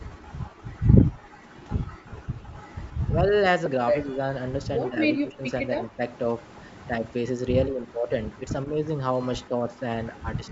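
Between 0.51 and 2.05 s the echo canceller clamped the microphone while the loudspeaker played, so the background was gated: the room sound ducks by about 14 dB in brief dips adding up to around half a second, then returns.

Inside that stretch, at 1.13 to 1.16 s, lost LE Audio frames forced the LC3 decoder to conceal 22.5 ms, which fits three 7.5 ms frames. It repeated the last spectrum with scrambled phase, so the sound briefly turns into a noisy smear. A single 7.5 ms frame drops again at 3.66 s, with the same short smeared blip.

From 3.09 to 6.01 s the speech is suppressed, likely because both sides talked at once and the canceller turned the near talker down along with the echo. The speech dips by roughly 20 dB in pieces totalling about 0.7 s. The same pattern returns from 7.66 to 10.51 s, shallower at around 10 dB and under half a second in total.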